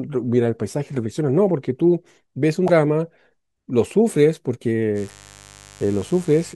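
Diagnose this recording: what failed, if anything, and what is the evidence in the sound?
Corrupted compressed data, a codec or storage-stage failure, reached the decoder twice. Bytes in the stream were lost or overwritten, so the decoder misread those frames, lost sync and had to hunt for the next valid frame header. Each time, the speech is broken by a short chirp or blip, at 2.65 to 2.70 s and again at 5.06 to 5.10 s, each lasting about 40 ms.

Mains buzz from the analogue wiring starts at 4.94 s and runs to the end of the speech. A poorly shielded path or a rectifier or dimmer on the supply is letting sharp switching spikes in twice per 50 Hz cycle, and their harmonics stack up into the kilohertz range. It is heard as a steady, raspy buzz roughly 25 dB below the speech, and the second data glitch at 5.06 s lands on top of it.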